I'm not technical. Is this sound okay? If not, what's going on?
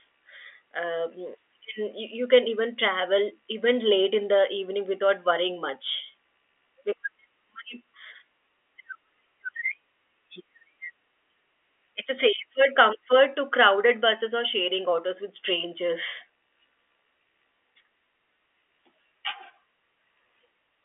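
Yes, nothing stood out as a problem when listening to this speech, which has the narrower, slightly boxy sound you'd expect from an ordinary landline telephone call.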